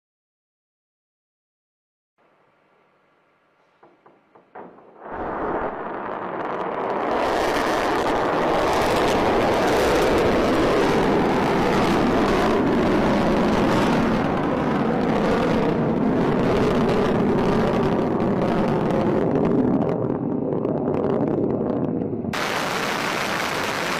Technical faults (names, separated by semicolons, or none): damaged data in a compressed stream